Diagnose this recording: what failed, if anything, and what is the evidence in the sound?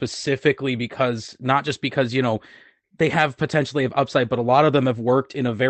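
Nothing failed here: the speech comes across as a normal WebRTC call path would deliver it, with the top end rolled off around 8 kHz as you'd expect from an Opus call setting, and no dropouts, glitches or other trouble to point at anywhere in the recording.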